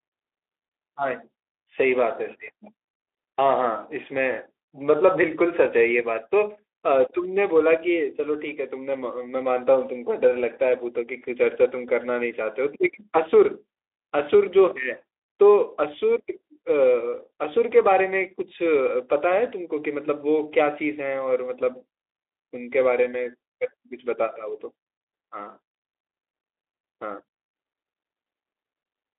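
Speech over a Speex path at 15 kbps, band-limited to roughly 300 Hz–3.6 kHz with nothing above 3.8 kHz and only light coding texture, and no faults found.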